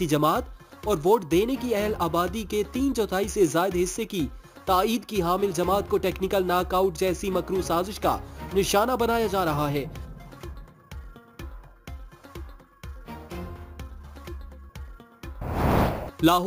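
Throughout, imaging from sample-and-hold upsampling is present: the audio was converted from 16 kHz to 44.1 kHz by repeating samples without a smoothing filter. A mirrored spectral copy fills 8 to 16 kHz at about 20 dB below the signal, heard as a metallic fizz tracking the sound's level.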